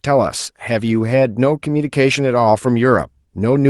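No technical faults can be heard in this speech.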